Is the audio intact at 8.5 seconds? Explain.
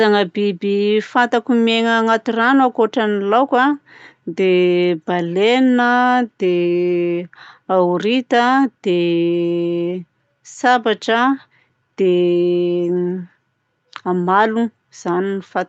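Yes, the speech at 8.5 seconds is intact, with no dropout, glitch or other fault at that moment.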